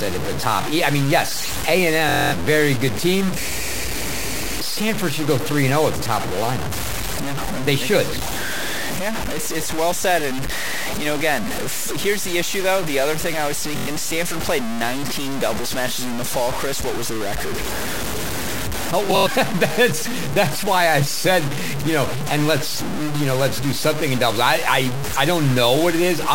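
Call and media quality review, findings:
Low bit depth without dither, throughout: likely truncation to about 4 bits; error nearly as loud as the speech, gritty and signal-following, quietest passages sputtering.

Bluetooth stutter: packets lost, last buffer replayed. Machine-gun repeats at 2.09–2.34 s before "very good team", 13.77–13.88 s after "other thing I would", and scattered 19.07–19.36 s.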